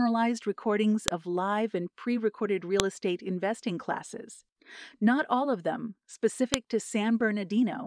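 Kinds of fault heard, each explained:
File header played as audio: Separate WAV pieces were joined without their headers being stripped. The header's bytes are then read as samples. That brief burst of meaningless data plays as a sharp, loud click. Here it happens three times, at about 1.08 s, 2.80 s and 6.54 s. Each click is a few milliseconds at most. It cuts across the speech regardless of what is being said. Each one marks where a new piece begins.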